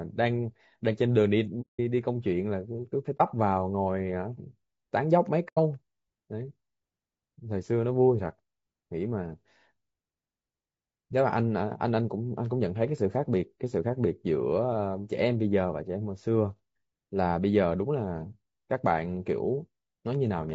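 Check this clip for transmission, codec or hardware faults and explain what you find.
Two faults are audible: codec roughness across the whole speech clip, and three short muted gaps.

Low-delay AAC compression: From start to end, the speech sounds rough and grainy, with noise filling the spaces between harmonics and an upper band that sounds thin and synthetic. The likely cause is AAC-ELD, the low-delay AAC used in video calls. Its short frames resolve pitch harmonics poorly and spend bits inefficiently, and the plainly audible damage fits a low bitrate of around 32 kbps.

AAC frame loss with muting: The sound fades out and back in at 1.61 to 1.80 s (180 ms), 3.18 to 3.21 s (30 ms) and 5.48 to 5.58 s (90 ms). The first and last are soft-edged holes; the single lost frame at 3.18 s is a brief dip. The decoder zeroed the spectrum of the missing frames, and the overlapping windows smoothed the edges. 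The gap lengths fit roughly six, one and three lost 30 ms frames.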